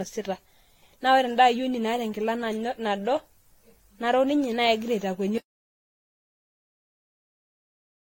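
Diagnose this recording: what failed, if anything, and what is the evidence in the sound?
Swirly, hollow speech with smeared attacks and nothing above 16.6 kHz: likely generation loss at the codec stage, about seven AAC re-encodes stacking quantisation noise.

From 5.38 s to the end, dead silence with no room tone: an audio dropout to silence, likely an input lost while the recorder kept writing silence.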